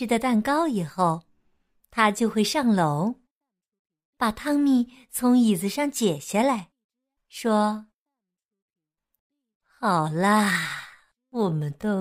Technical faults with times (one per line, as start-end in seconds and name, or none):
7.41-12.01 time-stretched section